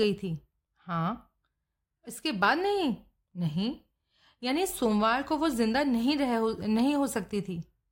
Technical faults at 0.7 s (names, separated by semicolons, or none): none